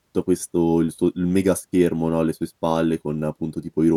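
Nothing goes wrong anywhere in this bit of speech, so there's no fault to point to at any moment.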